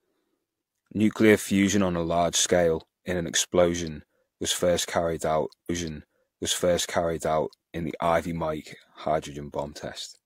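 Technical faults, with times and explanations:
5.65 to 7.66 s, stream segment repeated: right after "was first carried out", the speech jumps back and replays about 2.0 s of what we've just heard, then carries on with "in the". You get a small blip at the jump-back point where the player lands on the start of the duplicate chunk. It's the player fetching or queuing the same segment twice, so it stitches the repeat straight in and the whole thing runs about 2 s longer.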